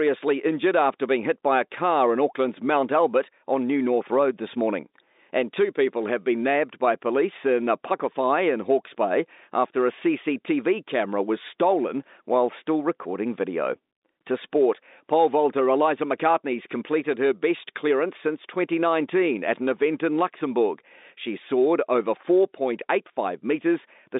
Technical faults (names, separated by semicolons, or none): none